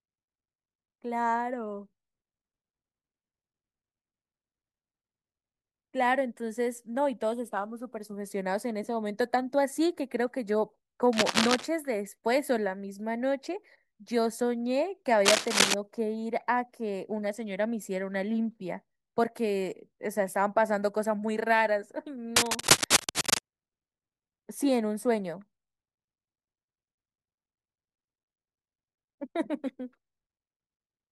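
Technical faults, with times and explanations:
11.13–11.67 s, 15.25–15.74 s and 22.36–23.39 s, cable scratch noise: dense, irregular bursts of crackle and rustle sit on top of the speech, about as loud as it in the first burst and somewhat louder in the later two. The likely cause is a worn cable or connector being moved, its contact resistance fluctuating rapidly. On a waveform these show as ragged, spiky clusters, and on a spectrogram as broadband vertical smears and speckles.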